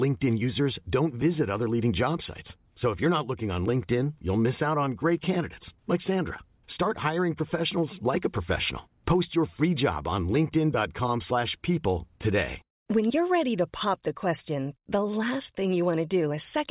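No technical faults can be heard anywhere in the recording. The speech runs without any audible interruption or damage at any point.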